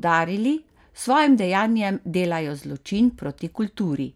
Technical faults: none

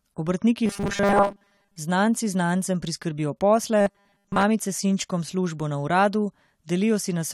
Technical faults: robotic sound from repeated short buffers

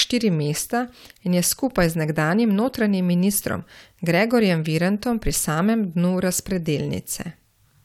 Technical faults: none

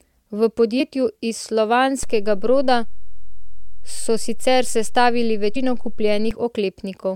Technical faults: damaged data in a compressed stream; DC step

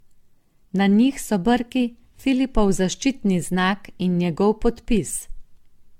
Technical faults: generation loss

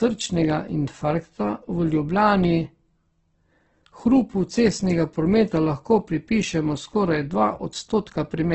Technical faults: Opus compression

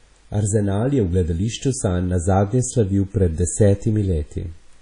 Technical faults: WMA compression

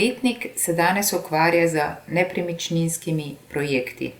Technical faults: corrupt frame decoded

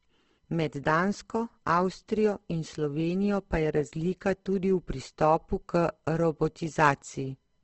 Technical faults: Opus compression

